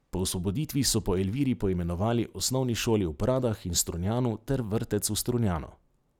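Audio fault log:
2.40 s, DC step: just before "osnovni šoli" the waveform's zero line jumps by about -36 dBFS, giving a brief low thump while the speech carries on unchanged. The offset then drains away as a 20 Hz high-pass pulls the baseline back to zero.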